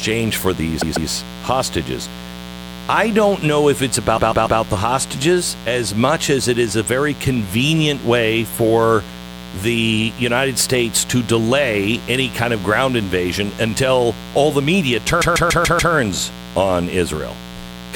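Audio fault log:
Throughout: mains buzz. A steady, raspy buzz sits under the speech at about 15 dB below it, built on 60 Hz. Sharp switching spikes from something like a dimmer, rectifier or an unshielded line are getting in twice per cycle. That's why it's a gritty rasp rather than a clean hum: those spikes throw harmonics of 60 Hz way up into the kilohertz range, so it cuts through the whole speech band.
0.81–1.09 s, 4.17–4.60 s, 15.21–15.93 s: repeated frames. Each time, a 144 ms chunk of compressed audio gets played over again. That gives you a stutter. The first spot replays it twice, adding 288 ms. The second, between "don't know if it's" and "the hostages as much", goes three extra times for 432 ms. The last, right after "all the media", loops five extra times and stretches things by 720 ms.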